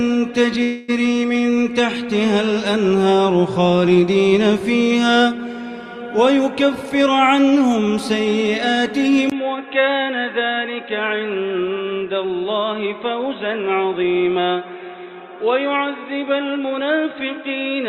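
From 0.63 to 0.90 s the sound stalls into a short fading buzz before carrying on where it left off, with nothing lost. This is likely a call audio freeze: delayed packets drained the jitter buffer, and the receiver stretched the last sound to fill about 0.25 s.

Between 6.75 and 7.07 s the audio briefly hurries at unchanged pitch, running at 113% speed. This is a jitter buffer speed-up: with too much audio queued, the receiver trimmed short pitch-period slices, about a twentieth of a second in total, to reduce delay.

At 9.30 s a 20 ms silence is followed by a duller, narrower sound, about 5 dB quieter, with nothing above 3.9 kHz and a faint new background noise far below the signal, lasting to the end. The likely cause is an input switched to a poorer device with a narrower band and its own noise.

From 15.65 to 17.07 s a second jitter buffer speed-up makes the audio sound slightly rushed at 107% speed. 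Roughly a tenth of a second of pitch-period pieces was cut to shrink the backlog.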